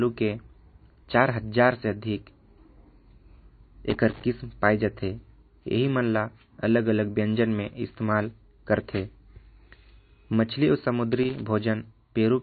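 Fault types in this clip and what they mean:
MP3 compression: The speech sounds plainly watery and swirly, with nothing above 4.5 kHz, and the damage runs through the whole clip. This likely comes from MP3 encoding at a low bitrate, around 28 kbps, where weak frequency lines are dropped frame by frame and the treble is cut.
loose connector crackle: Irregular bursts of crackle and scratching occur from 3.90 to 4.23 s and from 11.12 to 11.41 s. A worn or dirty contact was making and breaking rapidly as it moved, chopping the signal on and off during those moments.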